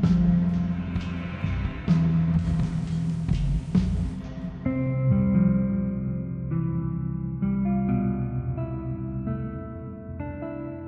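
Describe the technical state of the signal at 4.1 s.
At 4.1 s the sound is still on the FM fallback of a digital radio blending to analogue (2.36–4.23 s): a 110 ms cross-fade brings hiss roughly 35 dB down, with no level jump, unlike a dropout.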